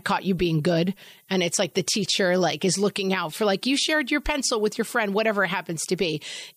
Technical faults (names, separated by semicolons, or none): low bit depth with noise shaping